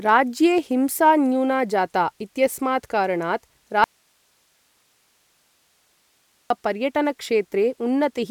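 At 3.84 s the speech cuts out abruptly in an audio dropout to a faint residue. For 2.66 s only hiss remains, roughly 45 dB below the speech. The signal likely failed upstream while the path stayed live. Speech returns at 6.50 s.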